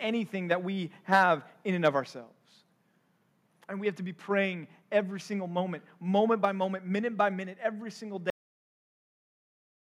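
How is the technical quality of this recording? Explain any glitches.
The recording has three problems: distorted peaks early on, a sudden drop in level just after them, and an ending that stops abruptly.

Between 1.12 and 1.24 s, after "that we", and again from 1.85 to 1.88 s, after "in and", the likely cause is microphone overload. The input drove the converter about 6 dB and about 2 dB past its limit, flattening the peak tops into a harsh crackle.

At 2.04 s, the microphone volume stepped down by about 4 dB, likely the call software cutting input gain after those clipped peaks. The speech and background suddenly become quieter together.

At 8.30 s, right after "by minute every single", there is a cut-off end. The final buffers never made it out, so the speech stops mid-sound and drops straight to digital silence with no natural decay.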